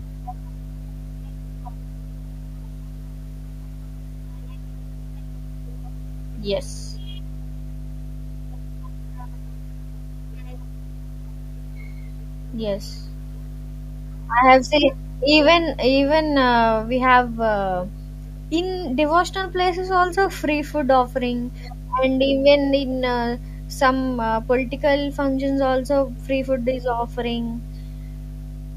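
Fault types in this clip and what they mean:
Mains hum: power-line current at 50 Hz leaks into the signal through a ground loop or nearby transformer. It is a steady tone under the speech for the whole clip, roughly as loud as the speech. Unlike rumble, it holds one fixed pitch.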